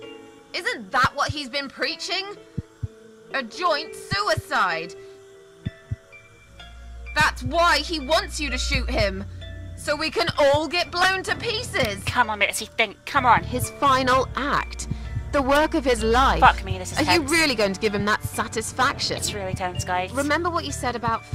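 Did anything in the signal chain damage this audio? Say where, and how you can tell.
No, nothing along the signal chain audibly damaged this audio, and the signal holds steady throughout with no disturbance attributable to any stage.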